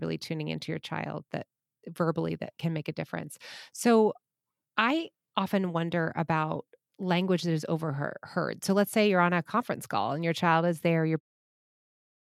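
Nothing's wrong with this speech clip; the only thing worth noting is the gentle fade-out near the end, which begins at about 11 s and is complete by 11.21 s, easing the level down without any click or hard edge.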